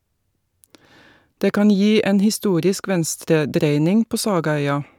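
Listening through the speech recording, nothing stood out as a technical problem at any point.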